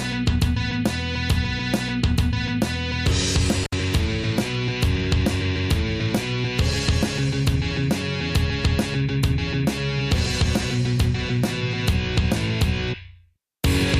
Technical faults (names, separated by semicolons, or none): intermittent contact